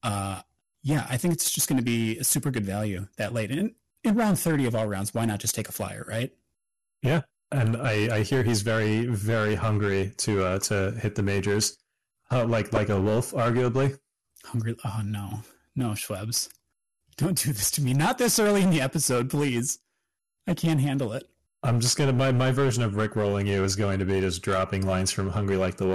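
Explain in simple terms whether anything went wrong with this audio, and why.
Two things went wrong. The first is hard clipping throughout the speech. The recording was driven louder than the equipment could handle, so the tops of loud moments are sliced flat. That happens on a small share of the sound and gives every loud syllable a harsh, fuzzy edge. It differs from ordinary distortion by being sharp crackle exactly on peaks, while quieter passages stay clean.

The second is damaged data in a compressed stream, heard as two brief glitches: one from 7.81 to 7.85 s and another at 12.76 s, just before "a wolf arguably". A bit of the file was corrupted, so the player lost its place and had to search for the next good chunk. Unlike clipping, these are isolated blips that don't follow loudness.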